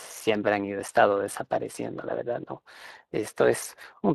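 From start to finish the speech carries Speex codec damage: a hoarse, noisy graininess where the CELP excitation runs short of bits, consistent with a middle setting near 22 kbps, and any band above 8 kHz is only a hissy fill rather than the swirly, smeared highs of transform codecs.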